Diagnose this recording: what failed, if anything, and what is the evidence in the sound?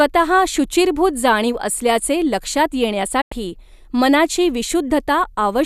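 A digital broadcast dropout at the reception and decoding stage. The speech cuts out just after "शुचिर्भूत जाणीव असल्याचे लक्षात", falling to silence through a quick fade of about 8 ms at 3.21 s and returning at 3.32 s. The muted stretch, roughly 96 ms of programme, is gone rather than delayed, which fits about four lost frames of 24 ms each. The receiver stopped getting valid frames, muted, and resumed once good frames arrived.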